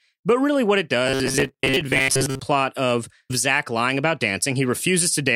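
From 1.07 to 2.40 s, just after "really what it", the speech becomes a rigid metallic buzz locked at 134 Hz, loosely following the words. This is robotic sound from repeated short buffers, likely from late-arriving audio, with a fragment of about 7.5 ms looped in place of most of the real signal.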